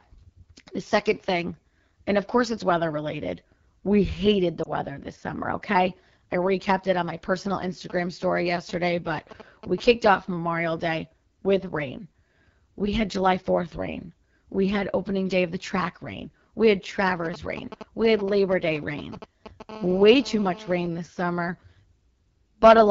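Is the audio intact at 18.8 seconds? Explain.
No. At 18.8 s, GSM signalling bursts from a nearby 2G phone are present, running from about 17.25 to 19.71 s. The audio circuit rectifies the radio bursts into a galloping dit-dit-dit of brief 217 Hz buzzes, somewhat below the speech. A spectrogram would show evenly spaced vertical stripes with harmonics stacked on 217 Hz.

The speech also carries AMR wideband (HD Voice) codec damage. The rough, raspy texture fits one of its lowest rates, around 8.85 kbit/s, where the model-based coding breaks down. On a spectrogram, content stops near 6.4 kHz and only smeared noise fills the region up to 7 kHz.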